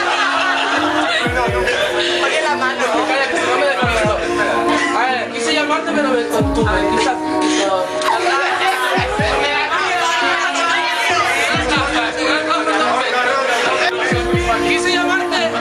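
Gain pumping runs throughout, likely from too much input gain feeding a fast limiter: the level ducks about 10 dB under loud sounds, leaving the sound squashed.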